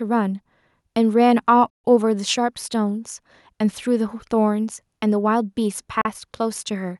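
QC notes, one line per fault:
1.70–1.84 s and 6.01–6.05 s: Bluetooth stall. The speech drops to silence for about 139 ms, then for about 38 ms near the end. Each time it resumes after the gap. The likely cause is radio interference holding back wireless packets. The headphones' buffer empties, so playback halts. Once the resent packets arrive, sound continues. The cut is abrupt because output simply stops.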